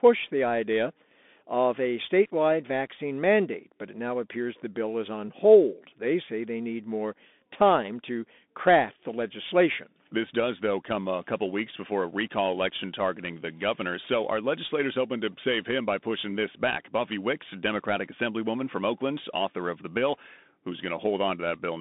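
Bluetooth CVSD headset codec, throughout: the speech sits in a narrow line band of about 200 Hz to 3.6 kHz, with nothing above 4 kHz. The plainly audible grainy hiss and scratchy sibilants fit a 64 kbps CVSD link.

Dropped samples, at 6.17 s: a single sharp click, likely from roughly one missing sample, which makes the waveform jump abruptly to a later value.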